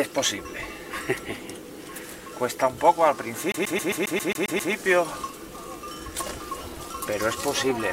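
From 3.52 s to 4.73 s the audio sticks in a CD stuck on one turn fault. A flaw on the disc surface knocks the laser back a track at the same point each revolution, so one fragment of about 134 ms plays nine times in a row. Each jump leaves a brief mute before the fragment restarts, giving a rapid, evenly spaced stutter until playback moves on normally.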